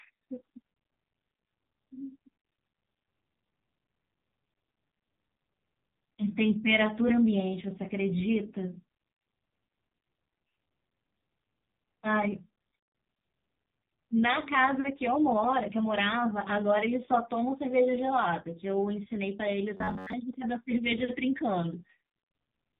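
AMR narrowband mobile codec, throughout: nothing passes above 4 kHz, and the heavy damage leaves the speech buzzy and synthetic, which fits a low bitrate around 5.9 kbps.

Robotic sound from repeated short buffers, 19.77 to 20.14 s: a rigid metallic buzz at 93.8 Hz covers most of this span, likely from a buffer of roughly 10.7 ms being replayed.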